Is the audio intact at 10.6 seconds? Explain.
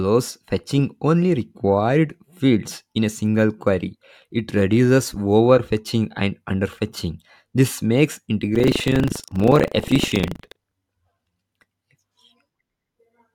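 No. From 8.52 to 10.73 s the speech suffers buffer tearing: writer and reader cross inside each 40 ms period, so roughly a tenth of every buffer replays audio about 70 ms old. It rattles as a 25 Hz buzz, with hard waveform jumps and vertical spectrogram stripes every 40 ms.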